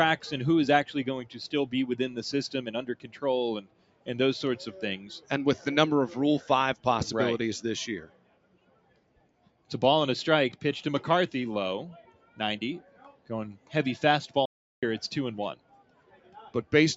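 A speech-tuned noise suppressor applied to music or sounds runs through the whole clip, treating steady, sustained material as noise and pulling it down by around 10 dB in swings, so held sound pumps and thins while attacks pass. A waveform shows the envelope bobbing, and a spectrogram shows sustained bands fading patchily. On top of that, sound is cut by the noise suppressor more deeply, by about 11 to 12 dB, at 2.93–3.19, 3.62–4.07, 8.04–9.7, 12.03–12.4, 12.8–13.3, 13.57–13.72 and 15.55–16.38 s. The longest, at 8.04 s, lasts about 1.5 s. These appear as dark, sunken stretches where tails are chopped short. A playback stall at 14.45–14.83 s drops the output to flat silence for about 0.37 s, a blank vertical gap on both displays, likely from the player running out of data. Throughout, the call's microphone processing takes out the lowest bass, which is normal.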